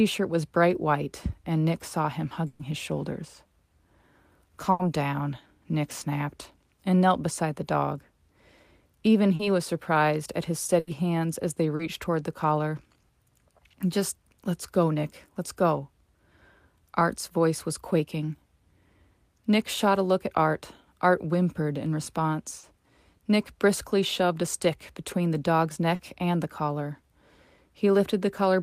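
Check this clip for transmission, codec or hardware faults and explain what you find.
Packet loss occurs at seven points in this speech recording, three as longer bursts and four as brief concealed gaps.

Burst of packet loss at 2.47 to 2.62 s, 4.71 to 4.82 s and 10.79 to 10.90 s. Around 120 ms of audio went missing in the first and about 80 ms in each of the others, arriving too late or not at all. The receiver stretched the last sound across each hole and faded it, so each gap comes out as a held buzz or fading hiss, and the speech then picks up further along, with that stretch gone.

Short concealed packet loss at 9.35 s, just before "was surprised at his"; at 11.75 s, between "hands as they" and "toward the collar"; at 22.59 s; and at 25.95 s, between "stick between the dog's" and "and the collar". Each time, about 40 ms never reached the decoder, and the receiver patched it by extending the preceding sound before blending back into the real audio. 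It shows up as a brief smear or wobble in the speech.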